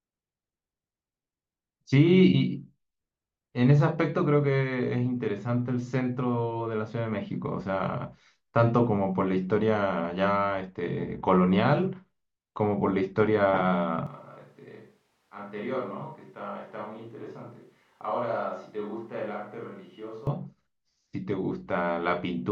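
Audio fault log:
14.07–20.27 s, switch to a distant microphone: speech suddenly turns roomy and bass-thin, about 10 dB quieter with more room noise, likely from losing the close mic. Unlike a plain gain drop, the tone changes too.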